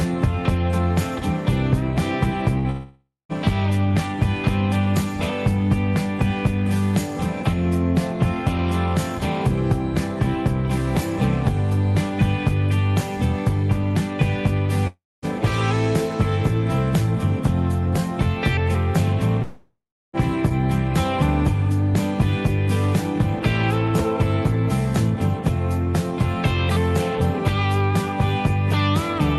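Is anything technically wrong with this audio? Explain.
Yes. At 2.58 s there is a burst of packet loss lasting about 0.09 s. A short run of audio never arrived in time, so the receiver stretched the last sound it had and faded it down for roughly 60 ms. The result is a brief held buzz or hiss, and then the audio resumes past the missing piece. On a waveform this shows as a smooth, shrinking smear instead of normal detail. On a spectrogram, the harmonics flatten into horizontal streaks.

Three longer gaps follow, likely caused by long network dropouts: 2.70 to 3.32 s, 14.87 to 15.25 s, and 19.42 to 20.16 s. In each, the same concealment stretches the last sound into a fading buzz or hiss, which then gives way to dead air of about 0.19 s, 0.23 s and 0.34 s respectively. The audio returns with that stretch gone. A spectrogram shows frozen streaks dimming into near-blank columns, and the waveform drops to a flat line before resuming abruptly. 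Throughout the clip, the call path's codec leaves nothing above about 12 kHz.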